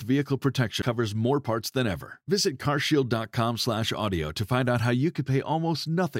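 At about 0.82 s there's a CD skip, just before "more parts than ever". The player drops out for only around ten milliseconds, long enough for a small tick, and then the speech carries on from a different spot, so the flow has an abrupt seam. It happens when the laser gets knocked or hits a flaw and lands on another turn of the disc's spiral, so playback resumes from the wrong place.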